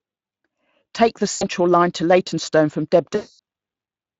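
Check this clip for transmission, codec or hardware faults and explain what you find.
There are two gaps of VoIP packet loss concealed by the speech codec, at 1.31 to 1.45 s and 3.15 to 3.39 s. The second is longer, covering about 240 ms of lost audio against about 100 ms for the first. In each gap the Speex decoder fills in by repeating its last pitch period and spectral envelope while lowering the gain. The speech smears into a fading buzzy tone or coloured noise and stays weak until the decoder's state recovers.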